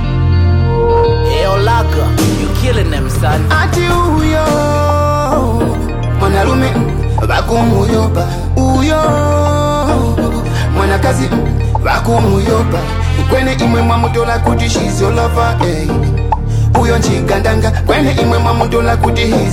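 No faults are audible anywhere in the clip.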